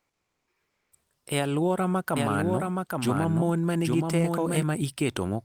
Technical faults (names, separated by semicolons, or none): comfort noise in place of the background; doubled audio track